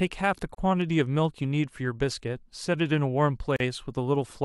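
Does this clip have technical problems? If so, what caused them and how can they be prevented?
Yes. There are two gaps at a join of encoded pieces in this speech clip. One runs from 0.55 to 0.58 s, about 37 ms long. The other runs from 3.56 to 3.60 s, about 38 ms long. Each is a short silence with smeared edges. The sound resumes right where it stopped. The pieces were encoded separately and joined untrimmed, so encoder start delay and last-frame padding remain. To prevent this, encode the audio in one pass or trim the delay and padding at every join.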